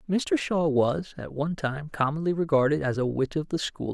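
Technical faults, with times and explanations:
Nothing stood out on listening to this speech recording.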